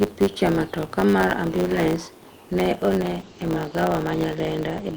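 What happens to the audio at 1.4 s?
At 1.4 s the speech carries a block size mismatch (truncated), present across the whole clip rather than just at that moment. One stage writes longer blocks than the next reads, which fits 512-sample blocks, and each block's tail is discarded. That splice repeats at 100 Hz, producing a steady buzz, while the speech runs about 1.07 times fast at near-normal pitch. A waveform shows jumps every 10 ms, and a spectrogram shows matching vertical striations with a 100 Hz harmonic comb.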